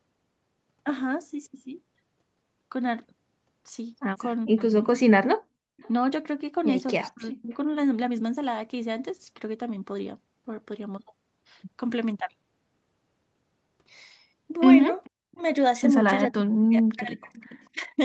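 Around 4.46 to 4.71 s the speech dips hard, by about 40 dB, for roughly a tenth of a second in total. That's speech suppressed in double talk, likely the echo canceller ducking the talker while both sides spoke at once. Inside that stretch, at 4.57 to 4.62 s, a faint delayed copy slips through, about 30 dB down and around 430 ms late. That's an echo leak, likely from a loudspeaker on one side whose canceller didn't catch everything. The same faint echo returns at 5.77 to 5.89 s. At 7.1 to 7.54 s the speech is suppressed again, about 40 dB at its deepest, for about 0.4 s in total. From 15.04 to 15.42 s the two overlap, with an echo leak at 15.04 to 15.37 s running into a suppression dip at 15.08 to 15.42 s. The longest cut runs from 16.31 to 18.0 s, where the speech drops out in pieces for about a second in total. A last echo leak, around 440 ms late, sits at 17.34 to 17.68 s.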